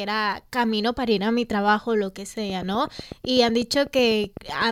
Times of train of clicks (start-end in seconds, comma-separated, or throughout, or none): 2.50-4.63